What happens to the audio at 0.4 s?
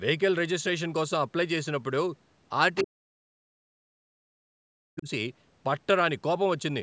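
Nothing goes wrong at 0.4 s: the speech passes through intact, shaped only by the ordinary call microphone processing, which trims the deepest bass and carries nothing above 8 kHz.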